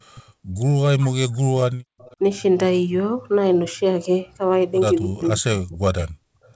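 At 0.14 to 0.21 s the speech dips by roughly 25 dB, and from 0.76 to 1.93 s it drops by up to about 40 dB. This is likely speech suppressed in double talk: the echo canceller, unable to tell the near talker from loudspeaker echo during overlap, attenuated both.

From 1.99 to 2.16 s a faint, delayed copy of the voice trails in, about 30 dB down and 280 ms behind the original. This is likely echo leak: the far end's canceller let some loudspeaker sound through its microphone and it returned.

A second suppression, again likely speech suppressed in double talk, runs from 5.05 to 6.1 s, with the speech pulled down by up to about 40 dB for roughly a second.

At 6.38 to 6.45 s the room sound drops by about 19 dB for a brief moment and then comes back. This is background gated by the echo canceller, which clamped the microphone hard while the loudspeaker was active.

Immediately after, from 6.45 to 6.5 s, another short scrap of echo appears, about 35 dB below the speech at the same 280 ms delay, likely a further echo leak. 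Throughout, the G.722 call path limits the band to 8 kHz.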